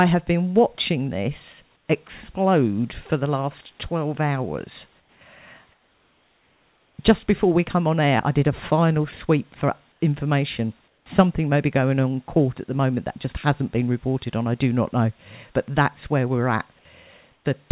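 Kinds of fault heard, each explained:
Comfort noise in place of the background: in six pauses the room hiss gives way to a flatter, featureless noise about 2 to 6 dB quieter, longest for 1.26 s from 5.72 s, likely because the sender stopped transmitting and the receiver filled in.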